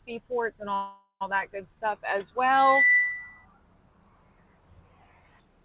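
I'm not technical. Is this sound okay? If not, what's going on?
No. From 0.74 to 1.23 s the sound stalls into a fading buzz, then resumes where it left off: a call audio freeze, likely from delayed packets. From 2.54 to 3.46 s a loudspeaker feedback squeal appears, a 2 kHz tone swelling over roughly a third of a second until it is louder than the sound.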